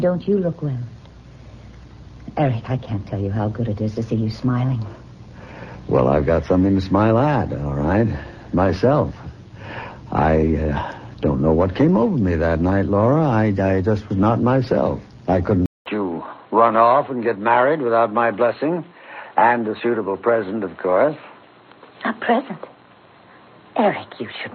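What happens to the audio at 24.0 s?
An input switch to a poorer device is in effect at 24.0 s; it begins at 15.66 s and lasts to the end of the clip. A 200 ms silence marks the switch, after which nothing reaches above 4.2 kHz, so the sound turns dull and boxy at much the same level as before. A new background noise sits roughly 40 dB under the signal. The likely cause is the recording changing mid-stream to a narrower-band microphone or a headset's call profile.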